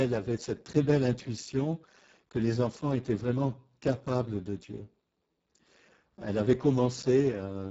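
Speech passed through the Speex codec at a very low quality setting, around 6 kbps, throughout, leaving it hoarse, noisy and near-robotic, with nothing above 7.7 kHz.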